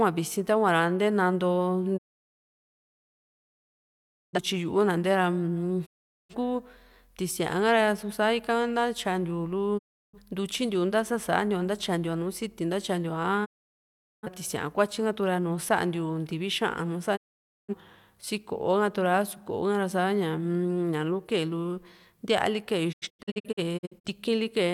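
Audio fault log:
1.96–4.39, 5.85–6.35, 9.77–10.18, 13.44–14.29, 17.15–17.74 s: digital broadcast dropout. The receiver lost valid frames and muted until good ones returned, so the speech fades out over about 20 ms and falls silent for 0.34 to 2.35 s each time, then resumes later in the programme. The missing stretch is simply gone.
22.91–24.09 s: digital broadcast dropout. Failures scattered over 1.1 s punch several short holes, the longest 85 ms, into the speech.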